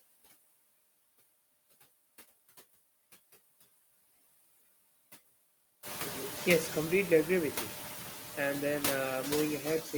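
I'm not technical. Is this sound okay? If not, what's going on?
No. A noise suppressor, a filter meant to strip steady background noise, is working throughout the clip and leaves noise suppressor artifacts. It turns the noise down sharply whenever nobody is speaking, then lets it back in under the speech, so the background keeps dipping and swelling. The leftover noise can flutter or warble. From about 6 seconds the room itself gets noisier, so the suppressor works harder there.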